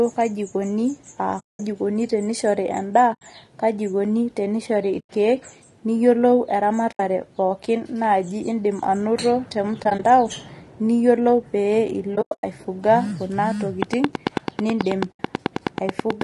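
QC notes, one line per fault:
Throughout: low-delay AAC compression. The speech is rough and grainy, with noise between the harmonics and a thin, somewhat synthetic top band. The damage is plainly audible. This is likely AAC-ELD, the low-delay video-call codec, at a bitrate consistent with about 32 kbps. Its short frames resolve pitch harmonics poorly and spend bits inefficiently, so the encoder cannot keep the harmonic structure clean.
1.39–1.60 s, 3.13–3.22 s, 4.99–5.10 s, 6.91–7.00 s, 9.83–10.00 s, 12.15–12.44 s, 15.11–15.20 s: AAC frame loss with muting. These are soft-edged holes. They last 0.2 s, 80 ms, 0.1 s and 80 ms. At 9.83 s, 60 ms of short dropouts is scattered over 0.16 s, the longest about 20 ms. At 12.15 s, 0.22 s of loss is spread over 0.28 s, the longest run around 0.1 s. The last one lasts 80 ms. The decoder zeroed the missing frames, and the overlapping windows fade the sound out and back in.
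13.83–16.22 s: train of clicks. Regular ticking at about 9.2 clicks per second, about twenty clicks in total, sits over the speech and the pauses. The clicks peak about 20 dB above the signal and are alike in shape. This is likely from electrical interference or a struggling interface injecting a repeated pulse. The muting hole at 15.11 s falls inside this stretch.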